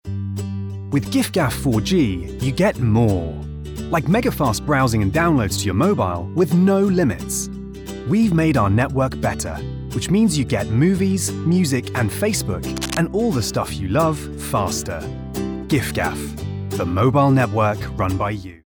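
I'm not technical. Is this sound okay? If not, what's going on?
No. From 12.76 to 12.97 s there is cable scratch noise, a brief, fairly loud rustle, likely from a worn cable or connector being moved.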